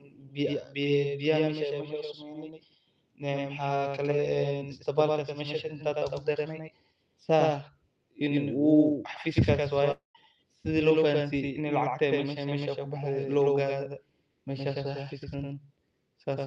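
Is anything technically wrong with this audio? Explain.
Yes. Throughout the speech, a doubled audio track is present: the audio was likely captured a second time by a slower path, so a full-band copy about 5 dB quieter trails roughly a tenth of a second behind, giving a clean, roomless slapback on every syllable.

From 9.91 s to 10.18 s there is a long network dropout. A stretch of packets likely never arrived, so the receiver stretched the last sound into a fading buzz, then held near-silence for about 150 ms. The speech resumes with roughly 240 ms of content simply gone. The top end stops near 12 kHz, which fits an Opus call path at 48 kbps.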